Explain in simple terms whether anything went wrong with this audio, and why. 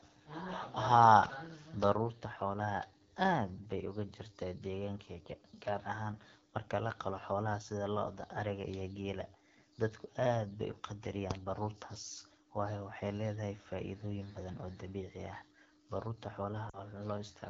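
Throughout the recording the speech sounds rough and raspy, with a buzzy, grainy edge. This comes from the AMR wideband (HD Voice) codec running at one of its lowest quality settings. It squeezes the voice into a simplified model of how speech is produced, and at this level the shortcuts are plainly audible.

Near the end, from about 16.69 to 16.82 s, the sound briefly smears, then drops out before returning weak. These are lost AMR speech frames. About 40 ms of data went missing, which fits two lost frames, so the phone guessed from the last good piece and quickly faded it away.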